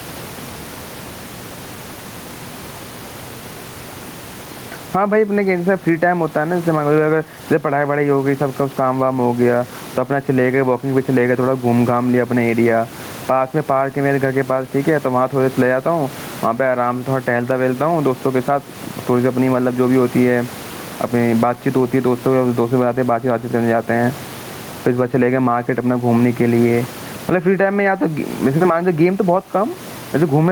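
Gain pumping runs through the whole speech clip. The level moves by around 15 dB, and the room noise sits about 28 dB below the speech. Loud and quiet passages end up pressed close together, giving a squashed, breathing quality. The likely cause is microphone gain set far too high, with a fast limiter or compressor clamping down on each loud sound.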